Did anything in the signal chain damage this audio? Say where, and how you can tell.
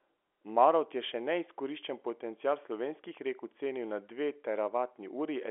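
No, nothing damaged this audio.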